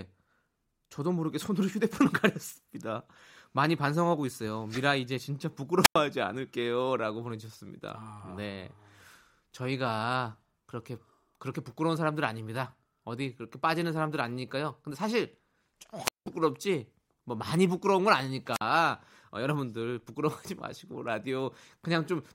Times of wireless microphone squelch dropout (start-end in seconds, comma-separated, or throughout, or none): 5.82-5.96, 16.03-16.26, 18.52-18.61